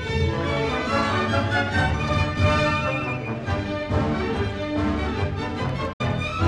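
At 5.93 s a digital broadcast dropout mutes the sound, which fades out over about 8 ms, stays silent until 6.01 s, then returns. The receiver lost the signal or rejected corrupt data, consistent with two lost frames. A clean silent gap, not a smeared or repeated fragment, separates it from concealed packet loss.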